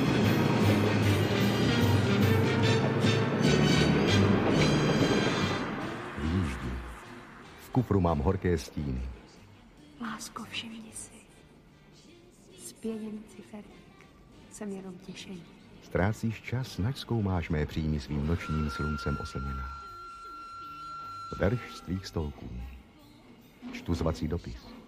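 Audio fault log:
Nothing to log here; I didn't catch a single thing worth flagging anywhere in this one.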